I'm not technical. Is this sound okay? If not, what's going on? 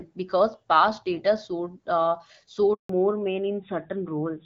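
No, there are two problems. At 2.73 s there's a handover gap: the phone switched networks, and the speech drops out completely for about 160 ms, until 2.89 s. Right after that, from 2.89 s to the end, there's a fallback to narrowband. The call leaves the clearer HD Voice it had been using and switches to an older phone codec, which cuts off everything above 4 kHz, so the speech sounds duller and rougher.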